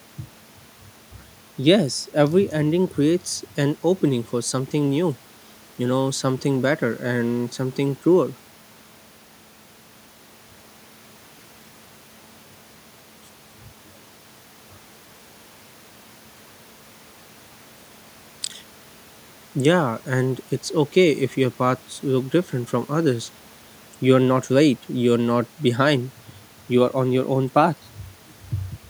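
No technical faults can be heard anywhere in the speech recording, and the signal stays steady and intact throughout.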